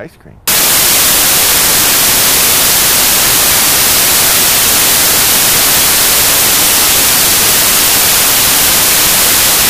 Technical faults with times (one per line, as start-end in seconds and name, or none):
0.47-9.69 samples built from the wrong bytes